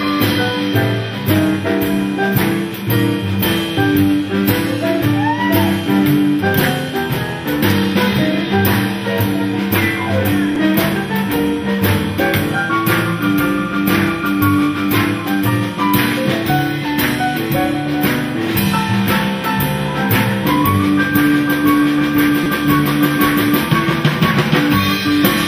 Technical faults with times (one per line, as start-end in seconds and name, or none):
10.55 repeated buffer
22.44-22.46 repeated buffer